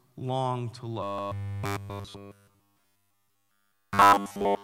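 It's a speech clip, and right after "long to", at about 1.03 s, it turns into robotic sound from repeated short buffers that lasts to the end: a rigid metallic buzz at 100 Hz, likely from the software looping the last 10 ms or so while pretty much all the real audio goes missing. There are also overlapping chunks. Around 1.19 to 1.23 s, a 44 ms slice plays twice where one chunk starts before the previous one finished, giving a quick stutter. With chunks that seem to be 2 s long, that's the only join inside the clip.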